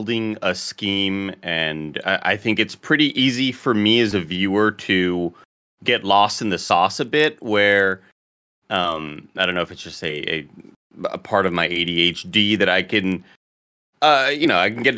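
Resampler restarted on every block, from 7.0 s to the end: each 40 ms chunk was converted alone, likely in a 48 kHz to 16 kHz step, so every chunk edge lacks its true neighbours and carries a small error. The speech gains a 25 Hz ticking buzz.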